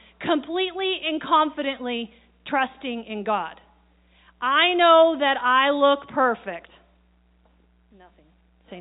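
No faults to report: the speech sits in an ordinary G.711 telephone band with nothing above about 3.8 kHz.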